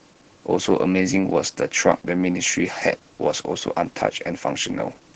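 A speech clip carrying Opus voice compression from start to finish, with heavy damage. The band stops near 8 kHz, and the voice sounds muffled, hoarse and faintly robotic, because the linear-prediction coder renders the excitation coarsely. That fits SILK running at roughly 10 kbps. A simple low-pass filter would dull the top end but leave the voice smooth. Here the buzzy, grainy texture marks starved codec coding rather than filtering.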